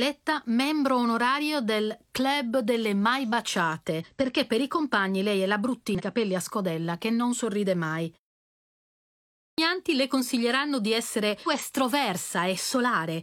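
A short speech recording carries two kinds of technical fault. Damaged data in a compressed stream is heard three times: at 4.00 to 4.06 s, at 5.95 to 6.02 s between "compagni lei è la" and "capelli a scodella che", and at 11.43 to 11.48 s right after "le consiglieranno di essere". Each is a brief chirp or blip. Bad bytes in the file confuse the decoder. It drops frames and hunts for the next valid header. There is also a clipped start after a pause at 9.09 s. The pause before it lasts about a second. The output device seems to doze in that silence. It then needs time to wake. So the first 0.49 s of sound is lost, and "le consiglieranno di essere" begins abruptly, missing its opening.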